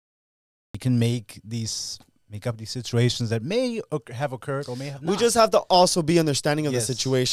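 The clip opens with a cut-off start: digital silence runs from 0 to 0.75 s, then speech begins abruptly mid-sound just before "can make these make", because capture began late. The waveform jumps from a flat line straight into the signal, and the spectrogram shows a hard vertical edge with no attack.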